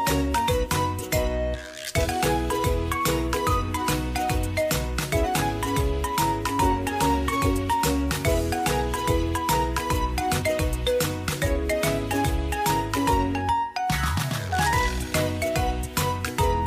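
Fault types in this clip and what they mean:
Compressed frames skipped: whole 46.4 ms frames of the encoded stream were missing or rejected by the decoder, so playback jumps ahead three or four frames, roughly 150 to 200 ms, at 0.63, 2.02, 5.23 and 10.38 s.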